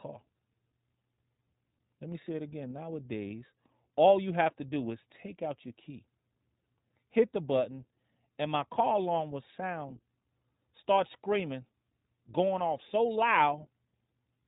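From start to finish the speech carries the sound of the iLBC codec, a narrowband VoIP coder. Nothing survives above about 3.8 kHz, so sibilants lose their hiss and the voice sounds boxed-in and thin. Each 20 ms frame's excitation is coded on its own, which leaves a plainly audible rough, slightly synthetic grain, consistent with the 15.2 kbps mode. On a spectrogram the energy stops at a flat ceiling near 3.8 kHz.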